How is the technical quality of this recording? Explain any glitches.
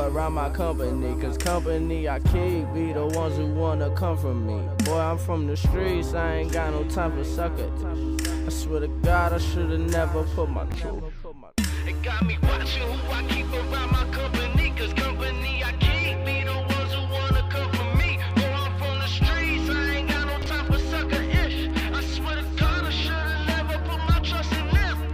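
Two brief glitches at 10.70 to 10.74 s and 20.42 to 20.46 s are chunks out of order. In each, a 20 ms chunk plays one slot late, swapping places with its neighbour, so the sound jumbles briefly at three hard joins. Unlike a dropout, nothing is missing.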